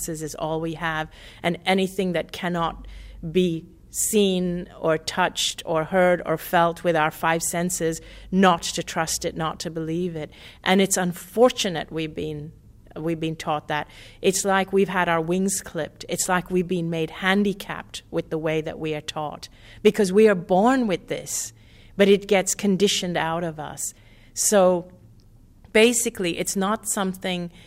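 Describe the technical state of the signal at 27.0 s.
At 27.0 s the signal is intact, with no audible fault at that moment.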